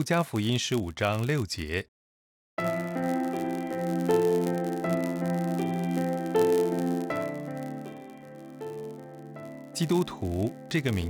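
Throughout the audio there is a steady 91.5 Hz buzz, the signature of a block size mismatch (padded). Each short block is zero-filled to a longer one, so a brief gap recurs at the block rate, and playback runs at 0.996 speed with timbre unchanged, unlike a resampling error.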